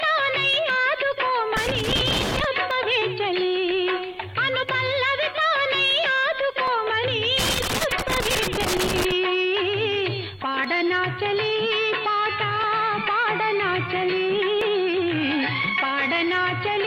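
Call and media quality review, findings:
Overlap between stream segments: tiny clicks/skips at 0.70, 2.71, 4.69, 6.68, 8.66, 10.65, 12.64, 14.62 s, spaced about 2 s apart, fitting 2 s segments. Player trims a few ms where timestamps overlap, so the waveform jumps. Strict regularity separates it from crackle.

Loose connector crackle: irregular scratchy bursts at 1.57–2.44 s and 7.39–9.12 s. Worn or dirty contact making and breaking, chopping the signal. Random timing and bursts lasting most of a second or more distinguish it from the periodic segment clicks.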